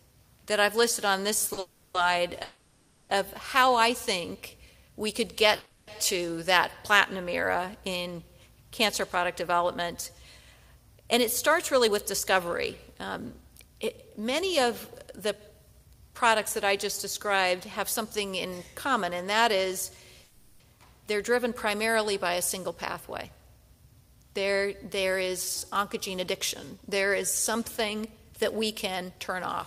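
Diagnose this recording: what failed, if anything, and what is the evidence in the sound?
Two short stalls from a late packet sit at 1.47 to 1.51 s and 1.53 to 1.59 s, a network and jitter-buffer failure. In each, a sound is held slightly too long, with 20 ms and then 40 ms of stretched fill, and the audio resumes exactly where it left off. Nothing is skipped. That separates them from packet loss, where content vanishes, and from the longer freezes, which hold far longer and fade.

Four holds are long enough to count as call audio freeze: 1.59 to 1.96 s (350 ms), 2.42 to 3.11 s (670 ms), 5.55 to 5.89 s (320 ms) and 20.24 to 20.62 s (360 ms). Each continues the last sound as a fading buzz or hiss without dropping to silence, then picks up from the same point. Packets held up on the network, draining the jitter buffer, are the likely cause. Unlike a stall, the fill lasts hundreds of milliseconds.

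A jitter buffer slow-down runs from 4.26 to 4.52 s. The buffer stage repeated short pitch periods to rebuild its reserve, adding 40 ms, so that stretch plays at about 87% speed with its pitch unchanged. Sounds are drawn out. A tape or clock fault would lower the pitch along with the speed, and here the pitch holds steady.

A jitter buffer speed-up covers 11.06 to 17.79 s and again 24.15 to 29.56 s. The buffer was holding excess audio, probably after delayed packets arrived together, and trimmed many small pitch-period slices, around 0.4 s and 0.3 s in total. Playback runs at about 105% with the pitch preserved, so the audio sounds slightly hurried rather than raised in pitch, which rules out a sample-rate mismatch.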